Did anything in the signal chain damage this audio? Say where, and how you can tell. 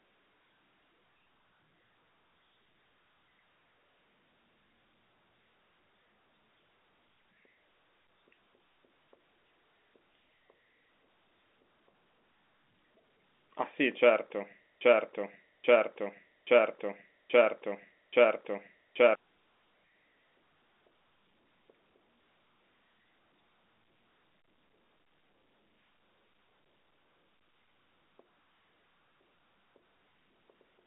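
Yes. From 14.81 to 19.15 s, the same 0.83 s fragment of speech repeats five times back to back, identical on every pass, and the speech that should have filled that span is missing. This broken-record loop is likely a stalled player or stream buffer resending its last fragment.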